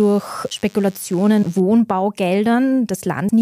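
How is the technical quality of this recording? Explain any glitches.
The recording has two kinds of fault: a DECT cordless phone buzz over the first part of the speech and two short glitches from damaged data in the compressed stream.

From 0.0 to 1.6 s, a DECT cordless phone buzz sits well below the speech. A nearby handset or base station transmits a radio burst every 10 ms, and the audio circuitry rectifies it into a thin 100 Hz buzz. On a spectrogram it appears as a stack of evenly spaced horizontal harmonic lines that stops at 1.6 s.

Damaged data in the compressed stream causes brief blips at 1.42 to 1.44 s and at 3.28 s. Corrupted bytes make the decoder misread frames and lose sync until it finds the next valid header. Each is heard as a brief glitch in the speech. The spectrogram shows a narrow vertical smear, and the waveform shows a small discontinuity.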